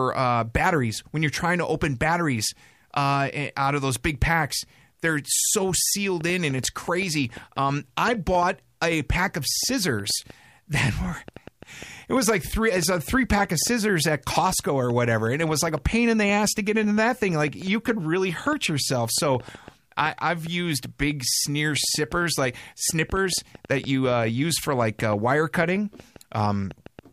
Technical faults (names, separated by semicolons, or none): train of clicks